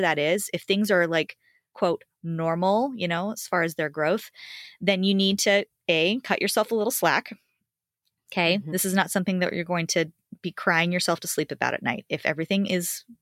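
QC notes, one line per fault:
Nothing here needs flagging; the speech comes through without a single problem worth a note.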